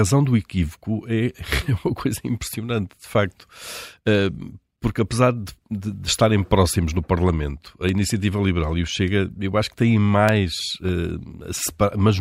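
Clock drift buffer slips run from 0.69 s to 12.09 s, heard as a click every 0.6 s through the speech, about twenty in all. Two clocks likely disagree by roughly 500 ppm, so the buffer between them drops or repeats about 15 samples at each slip.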